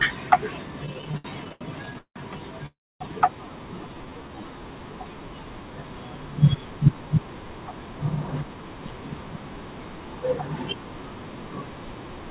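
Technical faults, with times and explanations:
0.86–2.18 s, repeated stalls (stutter): the sound halts fifteen times, with about 456 ms of stretched-out continuation filling roughly a third of the span and the longest hold 171 ms. Packets arrived late, so the jitter buffer kept draining; nothing is lost, but delivery drags and stutters.
2.66–3.02 s, call audio freeze: the last sound is carried on briefly, then fades into about 270 ms of silence, a 341 ms gap in total, after which the audio resumes where it stopped. This likely reflects packets held up in transit, emptying the buffer.
3.87–4.60 s, jitter buffer slow-down: this stretch plays at 83% speed with unchanged pitch, drawn out by about 129 ms. The receiver repeated single pitch periods and bits of pauses to rebuild its reserve, giving elongated sounds.
6.54–9.09 s, jitter buffer speed-up: playback runs at about 109% speed, same pitch, as roughly a fifth of a second of short pitch-period segments is cut out. 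The buffer had accumulated excess audio and was trimming delay, so this section sounds hurried.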